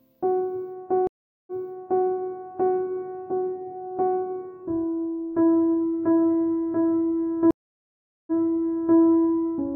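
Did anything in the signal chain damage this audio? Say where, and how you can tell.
Yes, a network stream reconnect: the link dropped, leaving silences of 0.4 s at 1.07 s and 0.76 s at 7.51 s, then a fresh decoder replays the music 0.6 s and 0.7 s earlier.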